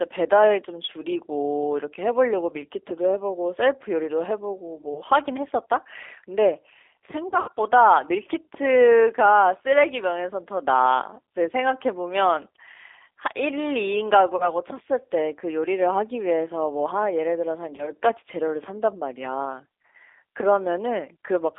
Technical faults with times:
0.00-21.59 G.729 codec
4.94-5.02 VoIP packet loss concealed by the speech codec
7.28-7.49 VoIP packet loss concealed by the speech codec
14.36-14.53 VoIP packet loss concealed by the speech codec
17.76-17.91 VoIP packet loss concealed by the speech codec

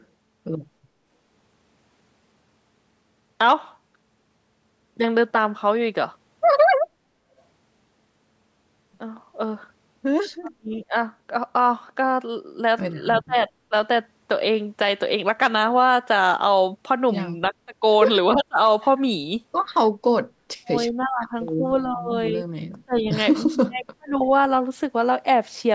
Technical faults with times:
0.00-0.05 echo leak
6.88-7.02 background gated by the echo canceller
7.38-7.42 echo leak
10.41-10.95 speech suppressed in double talk
13.26-13.74 speech suppressed in double talk
17.51-17.82 speech suppressed in double talk
18.35-18.58 speech suppressed in double talk
20.52-24.29 speech suppressed in double talk

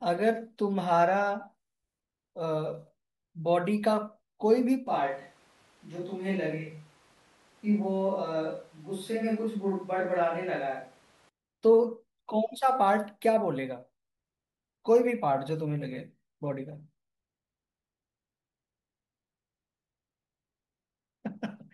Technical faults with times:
0.00-2.00 adaptive stream starting at a low bitrate
4.87-11.29 switch to a distant microphone

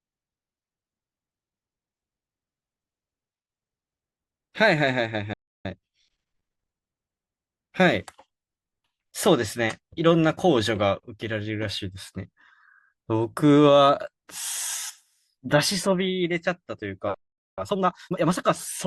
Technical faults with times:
0.00-4.00 adaptive stream starting at a low bitrate
5.33-5.65 playback stall
5.65-6.91 time-compressed catch-up
17.14-17.58 playback stall
17.58-18.44 time-compressed catch-up

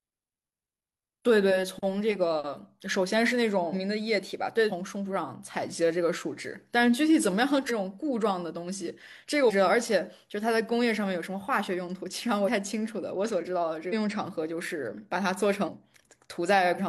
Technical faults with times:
3.69-3.73 compressed frames skipped
4.67-4.72 compressed frames skipped
7.66-7.71 compressed frames skipped
9.45-9.51 compressed frames skipped
12.44-12.49 compressed frames skipped
13.89-13.94 compressed frames skipped
15.64-15.69 compressed frames skipped
16.75-16.80 compressed frames skipped

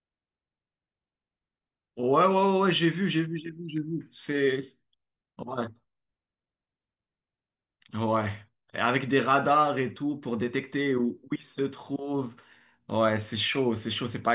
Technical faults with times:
none

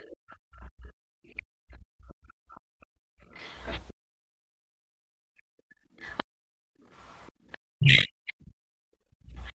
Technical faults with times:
0.11-1.42 other side's voice leaking through
0.51-4.95 background gated by the echo canceller
3.38-3.73 other side's voice leaking through
6.05-7.57 other side's voice leaking through
7.71-8.46 speech suppressed in double talk
8.74-9.55 background gated by the echo canceller
9.47-9.51 other side's voice leaking through

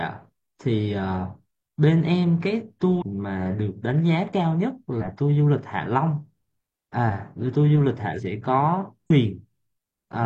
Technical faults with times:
2.98-3.02 damaged data in a compressed stream
4.97-5.03 damaged data in a compressed stream
8.13-8.20 damaged data in a compressed stream
9.06-9.11 damaged data in a compressed stream

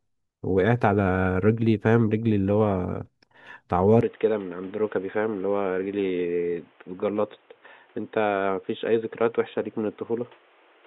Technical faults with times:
4.01-10.86 input switched to a poorer device

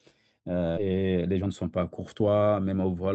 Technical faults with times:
0.77-0.79 skip ahead
0.87-1.80 jitter buffer speed-up
2.20-2.86 jitter buffer speed-up

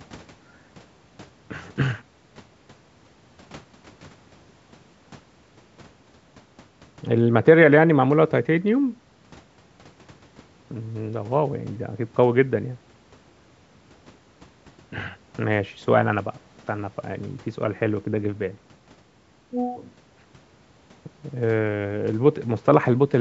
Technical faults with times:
none

